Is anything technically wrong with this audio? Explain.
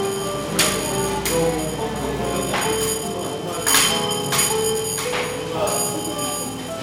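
Yes. Periodic clock jitter runs throughout the clip. Interference modulating the converter clock at around 2 kHz puts sidebands that far above and below every component, strongest on high-frequency content, giving a rough, metallic edge that disappears whenever the sound stops.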